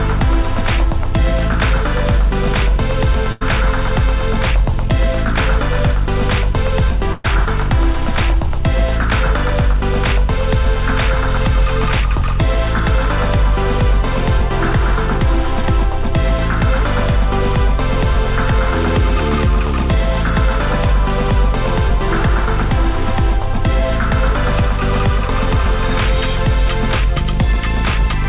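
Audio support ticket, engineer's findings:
Burst of packet loss, 3.32–3.44 s and 7.13–7.27 s, G.711 call path: consecutive packets lost or late; concealment stretches last sound, fading, about 90 and 110 ms; 80 and 120 ms skipped.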